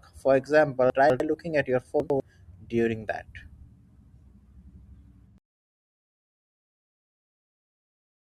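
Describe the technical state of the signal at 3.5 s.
At 3.5 s the speech signal is intact, with no audible technical fault at that moment.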